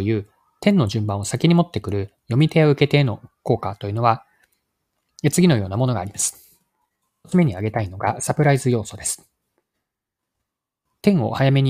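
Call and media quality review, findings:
No audible faults found in this speech recording.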